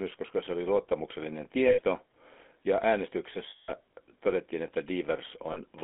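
Speech run through the GSM full-rate codec, and the damage is plainly audible. The voice has that buzzy, gravelly grain from pulse-driven vocal-tract modelling, and the band is squeezed to roughly 250 Hz to 3.6 kHz, which fits a 13 kbps GSM link. On top of that there are lost GSM frames in three places: right after "koska se oli luottamuksellinen" at 1.68 to 1.80 s, again at 3.50 to 3.72 s, and briefly at 5.52 to 5.61 s. In each one the decoder keeps repeating the last good frame, so the sound hangs as a rough metallic ring. The middle gap is the longest.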